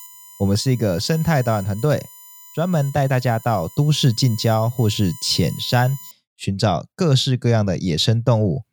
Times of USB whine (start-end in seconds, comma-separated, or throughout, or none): 0.00-6.11